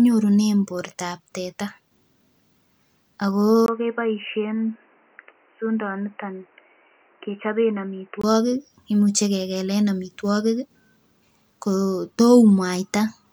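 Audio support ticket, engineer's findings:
Input switched to a poorer device, 3.66 to 8.24 s: speech turns dull and boxy, nothing above 3 kHz, about 5 dB quieter, new noise about 35 dB down, 20 ms gap at switch. Likely cause: capture moved to a narrowband microphone or headset call profile, then back.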